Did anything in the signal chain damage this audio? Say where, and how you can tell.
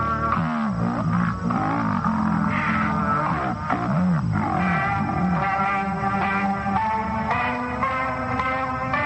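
Yes. Interleaved stereo was read as mono somewhere between storage and playback, at the sample-format conversion stage. The reader took alternating left and right samples as consecutive frames of a single channel, so every frame of real time became two. Across the whole clip the sound runs at half speed and a full 12 semitones, an octave, low. Because the two channels are interleaved, a fainter mirror image of the content also shows up in the upper half of the spectrum.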